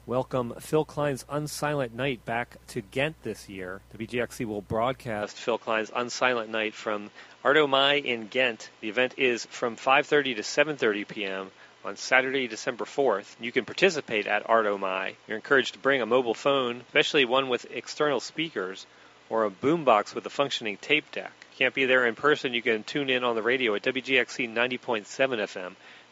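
At 5.22 s the sound abruptly changes character and stays that way to the end of the clip, with no gap at the transition. Content above about 7.4 kHz disappears, so the top end turns dull and boxy. The level shifts by roughly 5 dB and a faint new noise floor appears, sitting far below the signal. The most likely cause is that the input switched to a poorer device, whose narrower band, different tone and own background noise replace the original.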